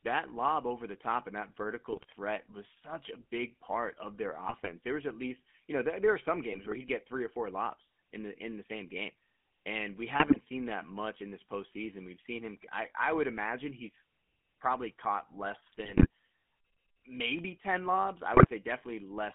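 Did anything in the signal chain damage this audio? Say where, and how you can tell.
Yes, at the codec stage throughout. The speech has the buzzy, gravelly roughness of the GSM full-rate codec, which fits its 13 kbps rate, and the band runs from 250 Hz to 3.4 kHz. That codec rebuilds speech from a vocal-tract filter driven by sparse, regularly spaced excitation pulses.

GSM bit errors from the transmission link appear in six bursts: 1.93–2.04 s, 4.44–4.70 s (after "big part of their"), 6.52–6.79 s (before "get three or four"), 10.20–10.37 s, 15.66–16.07 s (after "imagine he's probably caught") and 18.34–18.47 s. Corrupted filter, pitch and gain values distort the spectrum and level frame by frame, giving squawks, pops and gargling.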